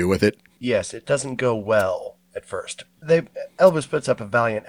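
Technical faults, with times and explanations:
1.78–1.83 s and 3.66–3.70 s, wireless microphone noise hit: two brief static swishes, the first between "it doesn't go" and "at first", as the radio link fades and receiver noise surges.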